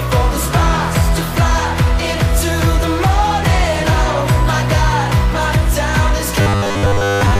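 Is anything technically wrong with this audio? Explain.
Yes. From 6.41 s to the end at 7.40 s, the audio turns into a rigid, metallic buzz at a fixed 100 Hz: robotic sound from repeated short buffers. The likely cause is audio arriving too seldom, so playback loops the last 10 ms for most of that stretch while new material is skipped. On a spectrogram this shows as flat, evenly spaced harmonics at multiples of 100 Hz; the waveform shows identical 10 ms cycles repeating.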